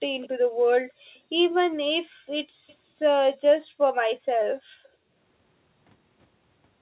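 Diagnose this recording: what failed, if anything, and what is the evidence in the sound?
Three faint repeats of the speech trail their source by 239 ms, at 0.22–0.29 s, 2.68–2.75 s and 4.83–4.88 s. The first sits roughly 25 dB below the speech and the later two around 35 dB down. This is an echo leak at the call-processing stage: the far end's loudspeaker output was picked up by its microphone, and the echo canceller there likely failed to subtract all of it, so short residual scraps returned down the line.

The room's background drops away abruptly by as much as about 40 dB over three spans: 2.08–2.29 s, 2.45–3.8 s and 4.17–5.13 s. The floor sounds dead for roughly 150 ms, about a second and around 700 ms respectively, then returns. This is background gated by the echo canceller, also in call processing. Whenever loudspeaker playback was detected, the canceller's suppressor clamped the microphone signal hard, taking the ambient sound with it until it released. 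The overall 4 kHz ceiling of the narrowband G.711 path is expected and not part of this.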